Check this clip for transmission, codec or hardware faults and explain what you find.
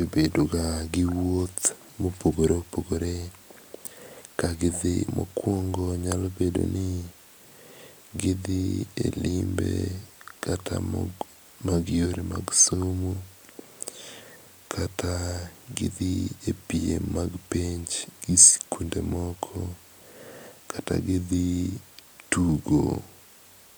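No faults turn up anywhere in this speech recording. There is nothing to break down event by event.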